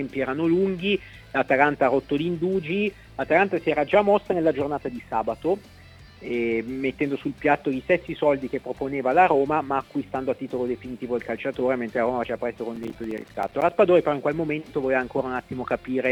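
The audio has processor overload crackle from 12.76 to 13.69 s. About thirty short buffers, around 5 ms each, arrive late and leave hard-edged silent gaps, heard as gritty crackle.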